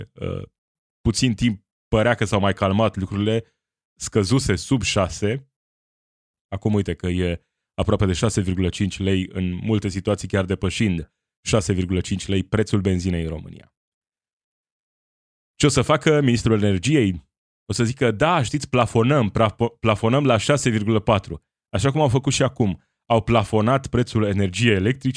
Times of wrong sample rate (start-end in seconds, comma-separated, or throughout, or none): none